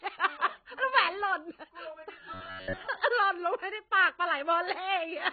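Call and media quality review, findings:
Dull, muffled speech for the whole clip, with nothing above 4.6 kHz and a warbling, fizzy smear on sibilants and sustained sounds. Likely cause: heavy AAC compression, consistent with AAC-LC at around 16 kbps. At that rate the encoder lowers its cut-off, starves upper bands and leaves spectral holes that shift frame to frame, producing the swirl and fizz. Affected component: encoder or bitrate setting on the send path.

Rigid metallic buzz from 2.34 to 2.87 s, pitched at 93.8 Hz and still loosely tracking the speech contour. Likely cause: robotic sound from repeated short buffers. Audio arrived too seldom, so playback looped the last chunk of roughly 10.7 ms (one over 93.8 Hz) while real audio was dropped. Most of the span is repeats rather than new signal. Affected component: jitter buffer or receive path underrun.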